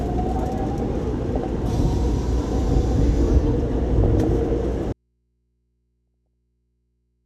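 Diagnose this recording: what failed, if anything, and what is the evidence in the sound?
Burbling at 1.35–1.59, 3.86–4.42 and 5.95–6.34 s: DAB burbling, in the codec stage, where residual bit errors corrupt MP2 sub-band samples and scale factors frame by frame.

From 4.93 s to the end the sound drops abruptly to mains hum about 50 dB down, an audio dropout to a faint residue, likely an input lost upstream while the path stayed live.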